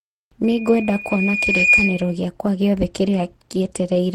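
At 0.43 s a loudspeaker feedback squeal begins in the speech. A microphone is hearing the loudspeaker it drives. At one frequency the loop gain goes above one, so that tone feeds on itself. Here it is a single tone at 2.4 kHz. It swells over about a second. It ends up a little louder than the speech beneath it. The howl holds until 2.18 s, when it stops.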